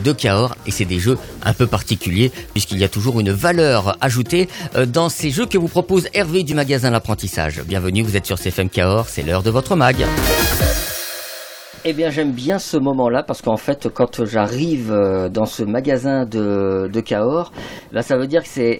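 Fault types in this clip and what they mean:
Overlap between stream segments: two neighbouring segments claim the same stretch of time, so the player discards the overlapping part and the waveform jumps across a few milliseconds of lost sound. Here it is heard as brief clicks or tiny skips at 0.57, 2.56, 4.54, 6.52, 8.53, 10.52, 12.50 and 14.48 s, about 2 s apart to match the segment length. Unlike a dropout, nothing goes silent, because sound is removed rather than muted.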